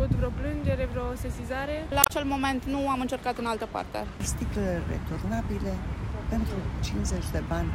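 The audio is interrupted by a brief glitch from about 2.0 to 2.1 s, the mark of damaged data in a compressed stream. Corrupted bytes there made the decoder misread its frames and lose sync until it found the next valid frame header, so roughly 0.1 s of the real content is disrupted. On a spectrogram this appears as a narrow vertical block breaking the surrounding patterns. The waveform shows an abrupt discontinuity at its edges.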